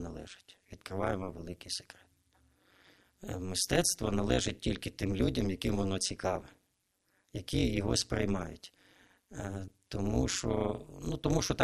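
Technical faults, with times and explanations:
Throughout, overlap-add ripple: the speech was split into windowed frames and rebuilt with an overlap whose windows do not add up to a steady gain, so the level dips and recovers once per frame, around 200 times a second. The dips are about 60 dB deep, almost silencing the signal between frames, which chops the speech into a harsh, metallic buzz rather than a gentle flutter.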